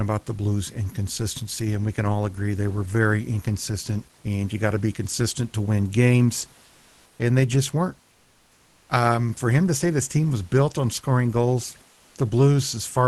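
Comfort noise in place of the background occurs in this speech clip at 6.65 to 7.19 s, after "consistent to win games", and 8.11 to 8.89 s, after "and they just weren't". The room noise in these pauses turns steady and featureless, about 2 dB quieter in the second gap. It is likely Opus discontinuous transmission, with the receiver filling the gaps with synthetic noise.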